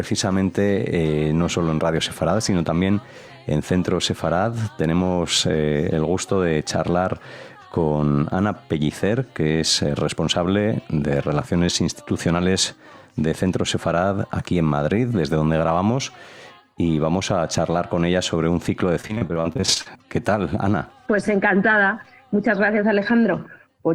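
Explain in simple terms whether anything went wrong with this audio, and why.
Repeated packet loss hit from 19.01 to 19.97 s: chunks kept vanishing and were patched by repeating the last sound, making it choppy and robotic.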